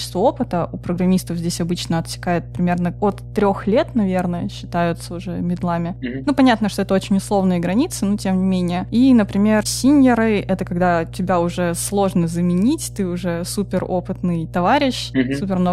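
There's mains hum running under this speech recording from start to finish, a steady low drone sitting at 60 Hz, the North American line frequency, and it's fairly prominent, roughly 15 dB below the speech. That kind of tone gets in when the power line couples into the signal path, usually through a ground loop between pieces of gear or a transformer sitting too close to a cable or input, so it never lets up between phrases.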